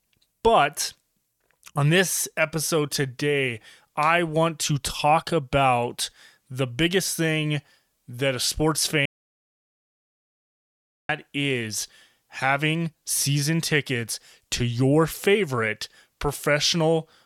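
From 9.06 to 11.09 s the speech falls into an audio dropout to silence lasting about 2.04 s, likely a lost input. It is plain silence with no room tone, unlike a fade or gap.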